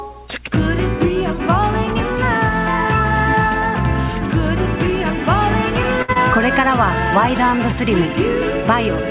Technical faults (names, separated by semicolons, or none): short stall from a late packet; short concealed packet loss